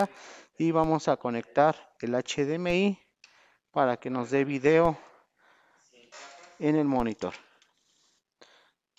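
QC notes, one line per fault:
0.84, 2.70, 4.85 and 7.00 s: DC step. The waveform's zero line jumps abruptly, giving a low thump. The offset then decays quickly, as through a 20 Hz high-pass.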